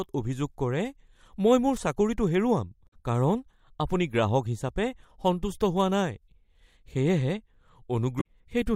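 At 2.85–2.93 s and 8.17–8.25 s, damaged data in a compressed stream makes the decoder misread frames and lose sync, giving short glitches that appear as blocky broadband smears on a spectrogram.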